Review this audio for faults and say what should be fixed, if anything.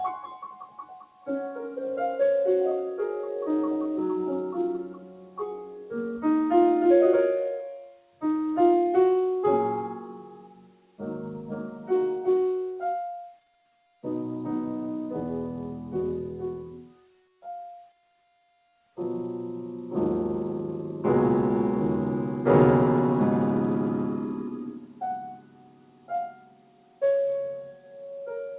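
A noise suppressor built for speech stays active on this material throughout, swinging the level by roughly 15 dB as it mistakes sustained tones and decaying tails for noise. Attacks pass while held portions sink, so the sound pumps and thins. Unlike a compressor, it responds to how steady the sound is, not how loud. Disable speech noise suppression for non-speech content, or switch the call into a music mode.

Sound cut by the noise suppressor is clearest at 0.11–1.28 s, 4.87–5.92 s (about 15 dB down), 7.77–8.23 s, 9.98–11.91 s, 13.34–14.03 s, 16.65–18.55 s, and from 24.72 s to the end, the others dropping by about 18 dB. The sustained stretches collapse while onsets survive, which separates this from a dropout, where everything vanishes at once. Turning the suppressor off prevents these dips.

The band stops at 4 kHz, consistent with G.711 A-law at 64 kbps, as expected on this call path.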